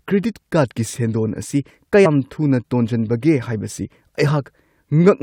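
At about 2.05 s the speech lurches forward: a chunk of compressed frames was skipped, so roughly a tenth of a second of audio simply never plays. That's consistent with around five frames of about 21.3 ms each going missing or being rejected by the decoder as corrupt. At the join, the sound simply jumps ahead.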